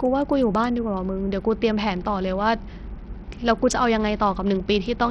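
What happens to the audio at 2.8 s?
At 2.8 s the speech sits inside damage that runs through the whole clip: the treble flickers and drops out, with gritty noise and aliasing on the sound. This is likely Bluetooth SBC compression, where a small bit pool starves the upper sub-bands, consistent with roughly 64 kbps.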